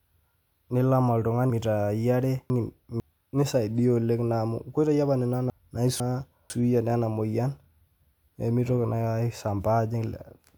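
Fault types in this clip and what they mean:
Chunks out of order: half-second blocks of speech play in the wrong sequence, one block two places late at 1.5–3.0 s and one a place late at 5.5–6.5 s. This jumbles syllables, and waveform and spectrogram show hard vertical seams.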